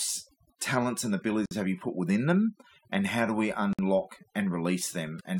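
A speech recording with overdone noise removal applied throughout: individual frequency bands near the noise floor are pulled far down or off, so the background collapses into near silence speckled with twinkling artefacts, and quieter voice components vanish. Two gaps at a join of encoded pieces also occur, at 1.46–1.51 s between "talents and" and "have you put within", and at 3.73–3.79 s after "how do we". Each is a gap of about 55 ms with smeared edges, after which the speech resumes where it stopped. This is consistent with separately encoded segments joined without trimming encoder start delay and final-frame padding.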